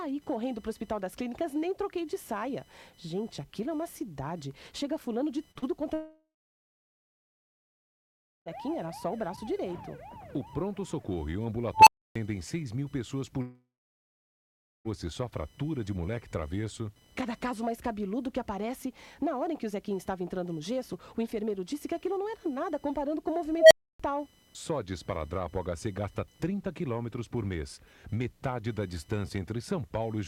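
Computer activity noise runs underneath the whole clip: a faint buzz pulsing around a thousand times per second, roughly 35 dB down, seen as a fine comb of spectrogram lines.

At 5.51–5.58 s and 5.59–5.65 s, two short concealed packet losses each lose about 40 ms, filling about 33 ms with extrapolated sound. They smear briefly, appearing as blurred, repetitive spectrogram patches.

From 5.94 to 8.49 s, a long network dropout is the likely cause of a fading buzz followed by about 2.2 s of flat, empty waveform. At 13.42–14.88 s, the same thing leaves about 1.2 s of silence.

At 11.74–12.16 s, an unstable filter swells a tone around 1 kHz to clipping within about 0.13 s, then cuts out for 0.29 s. The spectrogram shows a bright horizontal line and the waveform a flat-topped envelope before the blank gap. At 23.57–24.00 s, the same happens with a tone around 700 Hz that builds over 0.14 s.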